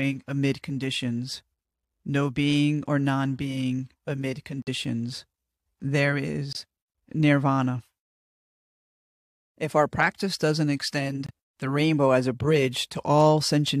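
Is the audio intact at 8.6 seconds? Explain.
Yes, the audio is intact at 8.6 seconds, with no dropout, click, distortion or other fault to be heard at that point in the speech.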